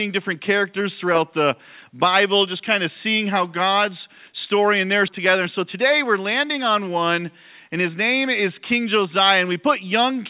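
The audio passes through a narrowband call path with nothing above 4 kHz, which fits G.711 mu-law at 64 kbps. At 5.08 s there is a skip ahead: roughly 0.7 s of audio is missing, and the two sides are joined with no gap, as audio was dropped while later audio was already waiting. From 5.18 s to 9.06 s a jitter buffer speed-up makes playback run about 6% fast at unchanged pitch, trimming roughly 0.2 s by removing short pitch-period pieces.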